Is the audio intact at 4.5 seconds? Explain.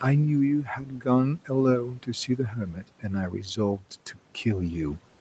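Yes, the speech at 4.5 seconds is intact, with no fault at that moment.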